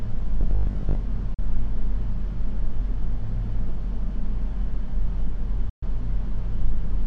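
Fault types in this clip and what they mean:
Robotic sound from repeated short buffers: from 0.41 to 0.99 s the sound turns to a rigid metallic buzz at 50 Hz, likely from a 20 ms slice being looped while fresh audio ran late, so around half of what you hear there is repeats.
Digital broadcast dropout: the receiver loses good frames and mutes, with a quick 3 ms fade, until decoding recovers. You get a 43 ms hole at 1.34 s, about one frame's worth, and a longer 128 ms gap at 5.69 s, roughly three frames gone.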